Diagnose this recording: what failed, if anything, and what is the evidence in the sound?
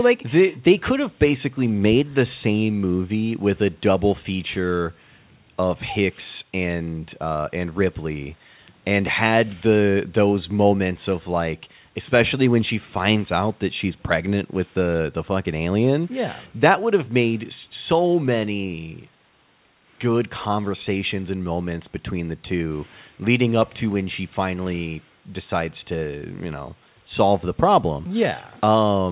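Nothing failed in this speech recording; the call path behaves as expected, with the band ending at 4 kHz as telephone-grade G.711 coding gives.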